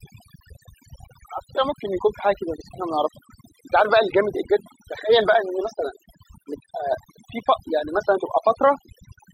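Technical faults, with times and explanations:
Throughout, overdone noise removal: a noise reduction stage set far too aggressively shuts individual frequency bands whenever they sit near its noise estimate, leaving near-silent gaps sprinkled with twinkling specks, unlike a plain low-pass muffling.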